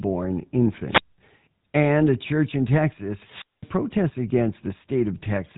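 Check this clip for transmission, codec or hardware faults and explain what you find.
Two kinds of fault are present: GSM-style codec coding across the whole clip, and two wireless microphone squelch dropouts.

GSM full-rate codec, throughout: The speech was coded by the original GSM full-rate codec, which models the vocal tract and drives it with a sparse, regularly spaced pulse excitation. The roughness fits 13 kb/s coding. Nothing passes above 3.9 kHz, so the voice sounds muffled, with a plainly audible buzzy, gravelly texture.

Wireless microphone squelch dropout, 0.88 to 1.18 s and 3.12 to 3.76 s: The FM radio link faded until the receiver's squelch shut off the output. Each event has a brief surge of hiss, then a silent gap of 202 ms in the first and 212 ms in the second, which comes just after "a church in". The speech then returns.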